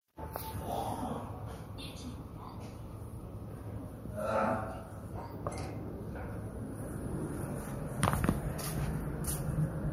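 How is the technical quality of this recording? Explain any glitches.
No audible glitches or faults.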